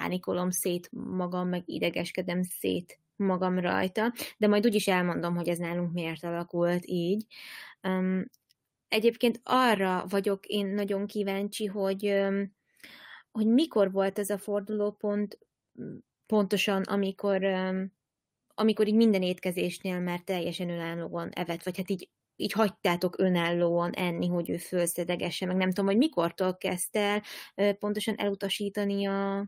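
A speech recording, with no technical faults to report. Nothing heard in the audio points to a problem in how it was recorded or passed along.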